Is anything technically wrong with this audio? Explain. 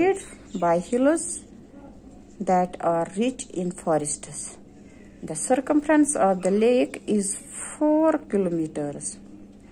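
Yes. Throughout the clip there is a steady ticking at 20 per second, close enough together to edge toward a buzz, and it is present only while there is signal. This is a resampler restarted on every block: each 50 ms block was converted on its own, which fits a conversion from 44.1 kHz to 48 kHz. At each block edge the filter lacked the real neighbouring samples, leaving a small error at every boundary that repeats at the block rate.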